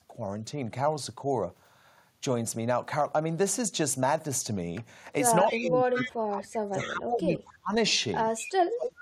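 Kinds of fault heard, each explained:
Speech suppressed in double talk: The speech dips slightly, about 5 dB, at 0.11 s, then drops by up to about 30 dB for roughly two seconds from 5.51 to 7.73 s and again from 8.7 s to the end, likely an echo canceller turning the talker down while both sides spoke.
Echo leak: Faint repeats trail the speech by 229 ms, about 10 dB below it at 5.44 and 6.0 s and about 15 dB below at 8.38 s, likely loudspeaker echo the far end's canceller failed to remove and sent back.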